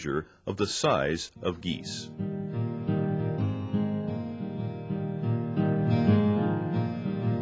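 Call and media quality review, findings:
No faults found. Nothing in the audio calls for follow-up on the call or media path.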